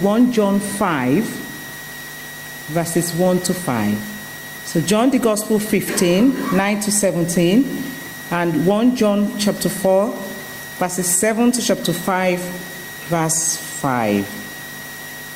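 Gain pumping runs right through: the level ducks around 10 dB under each loud sound, likely from a fast limiter fighting excessive gain.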